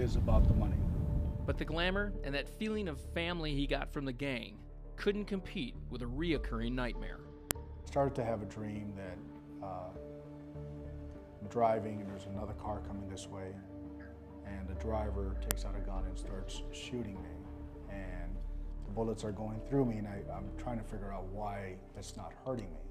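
At 7.51 s and again at 15.51 s there is a sharp, loud click, a file header played as audio. The pieces were joined every 8 seconds without stripping their headers, so a few dozen header bytes are read as sample values. Each lands as a snap regardless of the surrounding sound. On a waveform it shows as a near-instant spike, and on a spectrogram as a thin vertical line spanning all frequencies.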